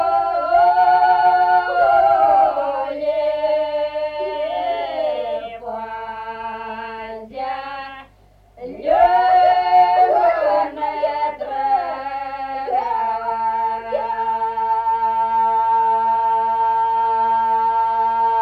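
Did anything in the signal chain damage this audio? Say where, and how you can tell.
No, nothing in the signal chain has left audible damage on this audio. No stage from capture through to playback leaves a mark anywhere in the clip.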